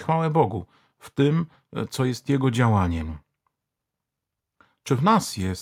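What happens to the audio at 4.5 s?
Nothing goes wrong at 4.5 s: the speech continues intact through that moment with no audible fault.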